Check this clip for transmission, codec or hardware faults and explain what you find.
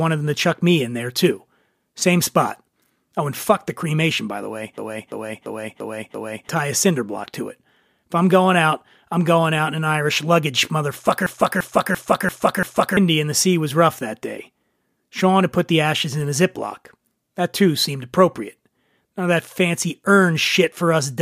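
Two system hang loops interrupt the speech, at 4.78 to 6.49 s (after "cremation by the way", before "tie a cinder block") and 11.26 to 12.97 s (before "and the sea was"). Each time a 341 ms slice repeats five times at 2.93 Hz as a machine-gun stutter, because the driver froze while hardware kept replaying its ring buffer. The loop length fits a 16384-sample buffer, and about a second and a half of audio is lost. On a waveform and spectrogram the identical blocks tile side by side with abrupt seams between them.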